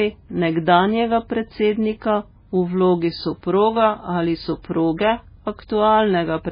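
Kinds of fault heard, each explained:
MP3 compression: watery, swirling speech with nothing above 5 kHz, heavy damage likely from an encoder starved of bits, consistent with a 16 kbps MP3 dropping weak frequency lines.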